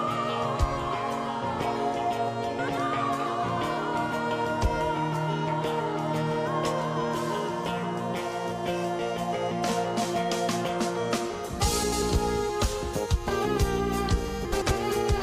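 Frames out of order at 2.58 to 2.78 s, 11.83 to 12.02 s and 14.52 to 14.72 s: in each of these roughly 0.2 s stretches, two adjacent blocks of about 93 ms were decoded in swapped order, which suggests runs of four frames apiece. The sound jumps forward and then back, giving a brief garbled flutter. Nothing is missing, and timing before and after each stretch stays aligned.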